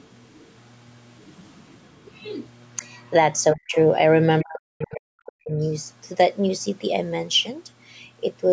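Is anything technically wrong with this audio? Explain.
Yes. The speech has two related problems from a call's echo control, on a recording that tops out around 8 kHz.

Speech suppressed in double talk occurs from 3.53 to 3.76 s and again from 4.43 to 5.52 s. The talker's level drops steeply, by as much as about 40 dB, for roughly a fifth of a second the first time and about a second the second time. The likely cause is an echo canceller that couldn't separate the near talker from loudspeaker echo while both sides spoke, and ducked everything. Unlike a dropout or packet loss, the cuts follow the overlap, and faint traces of the other side sit inside them.

The other side's voice leaking through appears in three brief scraps: 3.71 to 3.75 s at about 20 dB below the speech, 4.93 to 5.00 s at about 30 dB below, and 5.61 to 5.71 s at about 35 dB below. These are most likely residual loudspeaker echo that the canceller failed to remove from the microphone. 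Because they're quiet, short and unrelated to the talker's own sound, they read as a second voice bleeding in rather than as reverb or a delayed copy of the talker.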